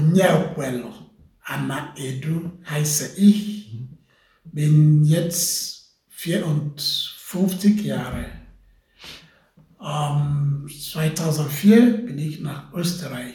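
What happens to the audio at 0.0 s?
Nothing goes wrong at 0.0 s; the audio begins cleanly and is intact at that point.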